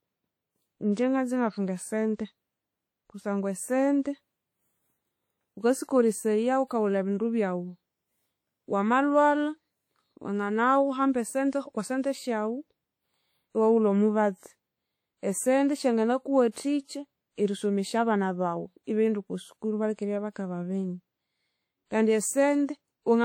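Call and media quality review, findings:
Likely WMA compression at a low bitrate, consistent with about 48 kbps: long transform blocks smear quantisation noise, giving ringing, washy speech with signal-following hiss throughout; nothing above 20.1 kHz.

Pre-echo from the same transform blocks spreading noise ahead of sharp onsets: hiss precedes attacks at 0.93–0.97 s (37 ms) and 16.51–16.56 s (48 ms), softening them.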